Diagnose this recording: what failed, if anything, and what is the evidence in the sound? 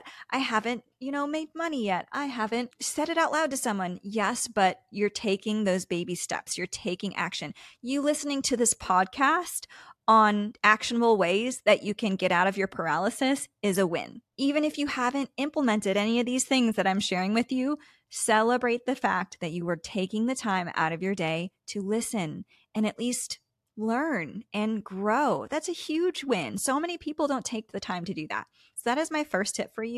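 Nothing in the speech signal points to a failure at any stage of the chain, from capture and conversion through transmission and storage to playback.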